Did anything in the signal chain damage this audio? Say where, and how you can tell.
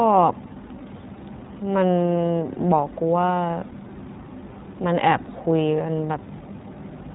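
Yes, at the codec stage: the iLBC codec runs throughout the speech. Nothing passes above 3.8 kHz, so a spectrogram shows a flat ceiling there. Each short frame's excitation is coded independently, giving an audibly rough, synthetic texture that fits 20 ms frames at about 15.2 kbps.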